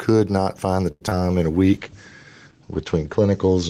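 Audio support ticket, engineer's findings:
Gain pumping, whole clip: around 5 dB of swing, dynamics squashed. Likely cause is mic input gain set too high, with a fast limiter/compressor clamping level on every peak.

Short stall from a late packet, 0.91–1.03 s: last sound held about 95 ms, nothing lost. Jitter buffer ran dry waiting on a late packet; receiver stretched audio until it arrived, adding about 95 ms of playout delay.

Short concealed packet loss, 1.07–1.22 s, after "not find the", before "in a": brief smear/wobble where about 40 ms of audio is gone, with a nested 20 ms hole at 1.09–1.13 s. Decoder extrapolated the last sound to cover gaps; playout delay pulled back about 40 ms.

Call bitrate drop, 1.75 s to end, after "in a": audio turns rough, watery or muffled. Bandwidth estimate fell, so the encoder dropped from 32 to 12 kbps, bottoming out for 1.42 s. Audio bandwidth narrowed from 20 kHz to 8 kHz, cutting off highs.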